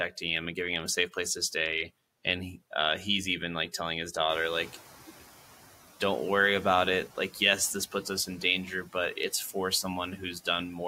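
Just after "even like telling his", at 4.29 s, the noise suppressor is caught catching up. The room noise jumps by about 13 dB at around 4.5 s, to roughly 20 dB below the speech, and the suppressor's noise estimate lags behind it, so the noise first passes through with less reduction. Over the next 760 ms the estimate adapts and the noise sinks by about 7 dB, settling by 5.05 s.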